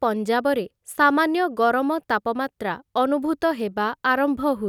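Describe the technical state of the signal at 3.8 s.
At 3.8 s the speech signal is intact, with no audible dropout, clipping, distortion or other technical fault.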